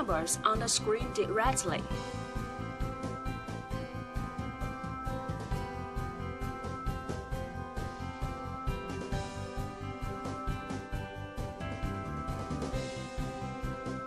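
No technical faults are audible anywhere in the audio.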